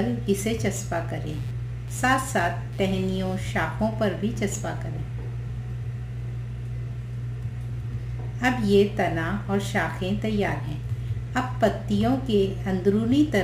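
From 1.28 s to 4.51 s, a buzzy, chirping rasp sits beneath the sound, pulsing at around 150 times a second and roughly 30 dB below it. This is computer activity noise: the computer's shifting processing load disturbs the audio circuit's shared ground.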